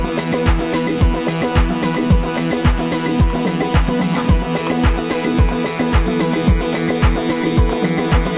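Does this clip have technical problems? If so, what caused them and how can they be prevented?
No, this clip has no technical problems to fix. It comes through a WebRTC call path working as intended, and nothing reaches above 4 kHz, which fits a narrowband G.711 mu-law codec at 64 kbps.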